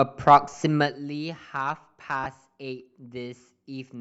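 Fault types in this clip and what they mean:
Lost LE Audio frames: The LC3 decoder filled gaps in the Bluetooth LE Audio stream by repeating the last spectrum with random signs. One lasts 10 ms at 0.53 s. Another spans 2.24 to 2.26 s, about two frames' worth.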